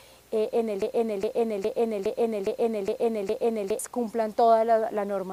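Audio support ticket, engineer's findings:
Broken-record loop, 0.82 to 3.79 s. Player, encoder or stream stalled, likely resending its last held fragment. A 0.41 s piece repeats exactly, back to back, 7 times for nearly 3 s. The audio due in that span is lost, and playback resumes at 3.79 s.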